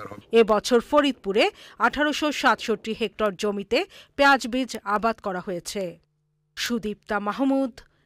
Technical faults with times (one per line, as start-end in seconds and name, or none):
0.28-7.94 word clock ticks